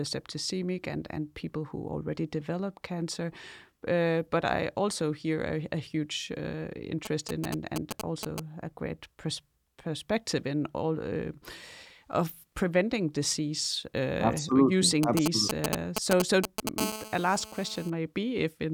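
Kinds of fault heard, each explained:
GSM signalling bursts: a nearby 2G phone firing short groups of radio bursts that the audio circuitry rectifies, giving a galloping dit-dit-dit of short 217 Hz buzzes. Here it appears after "a a huge uh", from 7.05 to 8.40 s, a little below the speech, then again from 15.03 to 16.69 s at about speech level.
GSM phone buzz: a nearby 2G phone transmitting continuously at 217 bursts a second, as in a call, so the rectified pulses become a steady, hard, raspy 217 Hz buzz full of harmonics. It runs from 16.78 to 17.90 s, about 9 dB below the speech.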